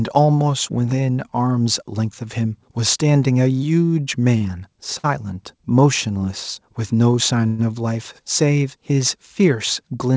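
At 4.38 to 4.43 s and again at 4.99 to 5.06 s, a packet arrived late and the jitter buffer ran dry, a short stall from a late packet. The receiver held the last sound for about 27 ms and then 50 ms before resuming, so the speech briefly drags with a faint buzz or dip but loses nothing.

From 7.47 to 7.60 s, a call audio freeze follows, likely from packets held up in transit. About 117 ms of stretched, fading buzz or hiss fills the wait, then the speech picks up where it stopped, with a small gap inserted.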